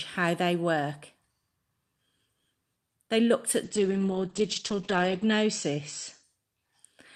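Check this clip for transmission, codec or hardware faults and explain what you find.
There's one fault here, a call bitrate drop from 3.65 to 6.30 s. The encoder got squeezed, and the coarse, rough texture fits a fall from around 48 to about 9 kbps. The top end also collapses from 20 kHz to 8 kHz, so the speech goes muffled, bottoming out for about 1.6 s before recovering.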